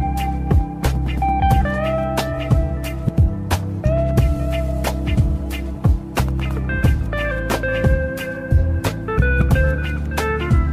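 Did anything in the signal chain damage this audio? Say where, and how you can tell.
No, nothing in the signal chain stood out as a problem when listening to this clip.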